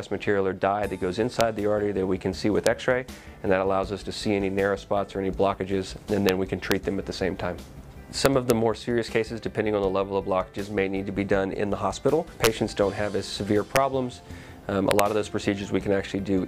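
A level running past the largest integer the signal path can hold is wrapping to the opposite sign instead of being limited, an integer overflow. The peaks flip across the full range, producing harsh cracks at 1.41, 2.67, 6.29 and 6.72 s, about 2 dB over the limit from 8.26 to 8.50 s, 12.44 to 12.47 s, 13.76 s, and 14.91 to 14.99 s.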